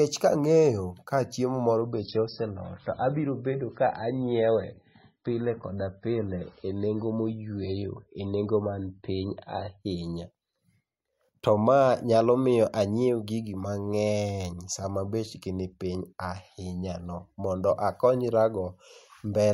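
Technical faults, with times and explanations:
1.81 to 9.81 s, adaptive stream at a lower bitrate: Right after "ka chiemo" the speech turns dull and swirly, with nothing above 5.6 kHz. The stream switched to a much leaner version when the connection slowed. That fits a drop from around 128 to 16 kbit/s MP3. The switch is sudden, with no gap.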